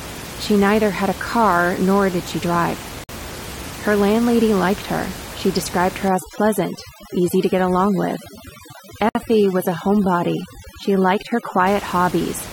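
Right after "nor did she drive", at 3.04 s, there's a gap at a join of encoded pieces: a gap of about 53 ms, then the sound resumes where it left off. The pieces were encoded separately and spliced untrimmed, so each one's start-up delay and end padding stayed in. From 6.08 s, just after "her she described her", overdone noise removal kicks in through 11.67 s. It pushes the room noise, which sits about 14 dB under the speech, down to near silence with twinkly specks, and quieter bits of the speech get gated away. Another join gap appears at 9.09 s, about 60 ms. With the gaps 6 s apart, the pieces look to be about 6 s long.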